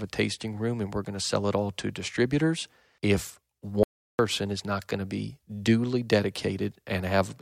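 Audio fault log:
3.83–4.19 s, audio dropout to silence: the speech cuts off mid-flow and resumes 0.36 s later, with nothing in between, not even room tone or background hiss. That dead silence, entered and left abruptly without any fade, sets it apart from a deliberate pause, which leaves some ambience. The likely cause is the input briefly lost while the recorder kept writing silence, so whatever was said in that gap is gone.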